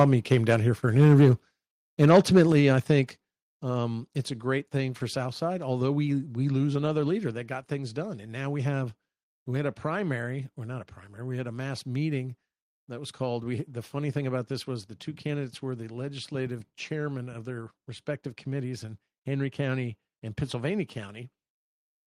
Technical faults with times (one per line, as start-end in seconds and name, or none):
0.00-0.05 microphone overload
0.03 microphone volume stepped down
0.99-1.31 microphone overload
2.02-2.43 microphone overload
2.52 microphone volume stepped down
3.54 microphone volume stepped down